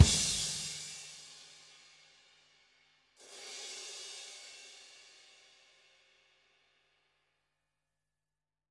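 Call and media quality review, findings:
No audible faults found.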